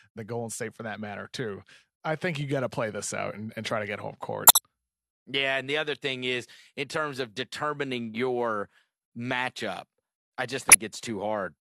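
Corrupt frame decoded at 2.41 s (a faint blip between "matter too I think" and "you got to play"), 4.47 to 4.58 s after "try to get home", and 10.67 to 10.76 s after "your matchup I just". Damaged compressed frames were played anyway, spraying energy at the wrong frequencies. The later two are loud, near about -5 dBFS, and sound like chirpy bursts lasting several frames.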